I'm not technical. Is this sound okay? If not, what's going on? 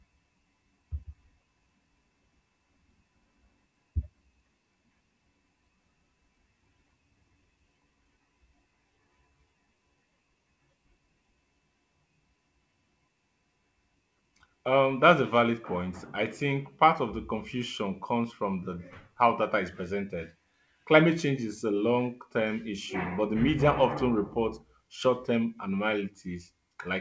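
Yes, nothing stood out on listening; the speech has the slightly narrowed sound typical of an internet call, with nothing above about 8 kHz, but that is simply how the call line carries audio and not a problem.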